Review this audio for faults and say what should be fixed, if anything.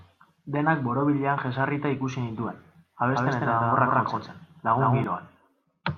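From 3.14 s to 5.04 s, right after "borobilean jesarrita ikusi nituen", the speech has a doubled audio track: a full-band copy about as loud as the original trails it by roughly 150 ms and starts and stops abruptly. It is likely caused by a second, slower capture path being mixed in. Monitor only one input route per source and mute duplicate returns before recording.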